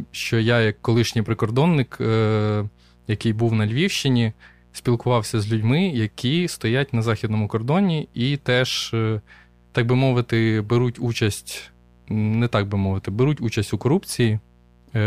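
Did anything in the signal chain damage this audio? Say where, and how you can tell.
Yes: mains buzz runs through the whole speech clip, from start to finish, so the damage happened in the analogue wiring before conversion. A steady, raspy buzz sits underneath the speech, roughly 35 dB below it. Its harmonic series is built on 60 Hz and climbs well into the kilohertz range. That points to sharp switching spikes, twice per mains cycle, from a dimmer, a rectifier or a poorly shielded cable coupling into the signal path.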